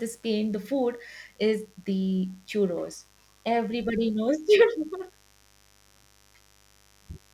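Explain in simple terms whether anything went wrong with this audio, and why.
Mains buzz runs from start to finish, a steady raspy hum sitting quietly beneath the speech. Electrical noise from the 50 Hz power supply leaked into the recording, arriving as sharp spikes 100 times a second, which our ears hear as a gritty buzz rather than a smooth hum.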